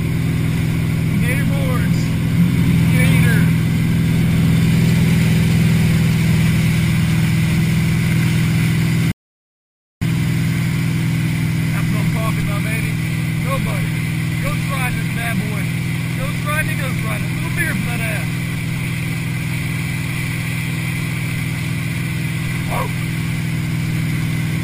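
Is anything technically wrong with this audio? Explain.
Yes. From 9.12 to 10.02 s there is an audio dropout to silence lasting about 0.9 s. The sound cuts off mid-flow and returns abruptly. The gap holds no room tone. The likely cause is a lost input, such as a disconnected device, failed link or mute, while recording continued.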